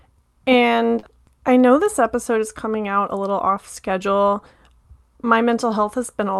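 At 0.99 s, running to 1.06 s, there is a short concealed packet loss just before "I know this episode". About 40 ms of the call arrived too late or not at all. The receiver patched the gap by extending the last stretch of sound for about 34 ms, then faded back into the real signal. It is heard as a brief smeared wobble. The audio around it carries the coding texture of a call codec, with a high-frequency limit near 12 kHz, which fits a 48 kbps Opus stream.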